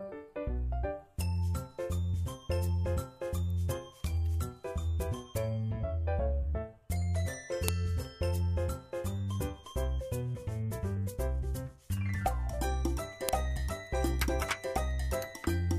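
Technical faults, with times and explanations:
7.68 s and 13.29 s, file header played as audio: a sharp, loud snap at each point, where a new piece of the recording begins and its header bytes were left in and played back as sample values. Each snap lasts about a millisecond and arrives whatever the sound is doing. Unlike a dropout or splice click, no sound goes missing around it, and its jolt doesn't follow the surrounding level.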